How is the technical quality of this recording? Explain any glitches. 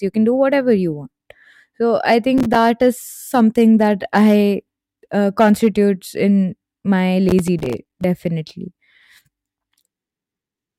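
The recording has two bursts of processor overload crackle in the speech. From 2.38 to 2.55 s, and again from 7.29 to 8.04 s just after "uh constitutes in my", the processor misses buffer deadlines again and again. Each missed buffer of around 5 ms becomes a hard-edged gap of silence. The first burst is brief. The second lasts longer and runs to roughly twenty dropouts. Both are heard as gritty crackling over the speech.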